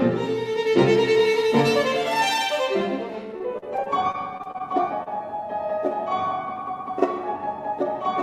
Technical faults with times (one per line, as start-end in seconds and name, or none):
3.37-4.61 repeated packet loss (robotic sound)
5.03-5.08 short concealed packet loss